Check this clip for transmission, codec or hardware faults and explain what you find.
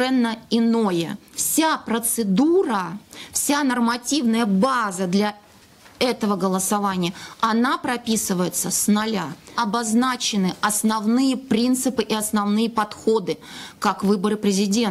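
No transmission, codec or hardware faults can be heard anywhere in the signal, which holds steady in continuity throughout.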